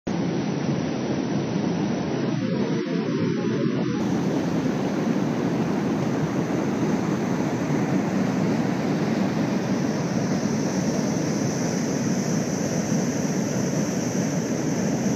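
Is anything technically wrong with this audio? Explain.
Yes. This is an adaptive stream starting at a low bitrate. From 0.0 to 4.0 s the player was on a low-bitrate rendition while it measured the connection, then switched up. The dull opening, with nothing above about 6.6 kHz and stronger codec artefacts, points to AAC-LC at about 27 kbit/s. At 4.0 s the treble returns and the sound clears abruptly with no gap, which fits a step to roughly 96 kbit/s.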